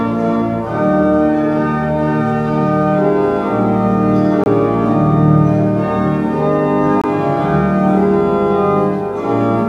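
Two 23 ms silences at 4.44 s and 7.01 s are likely a Bluetooth dropout: the audio resumes further along instead of picking up where it stopped.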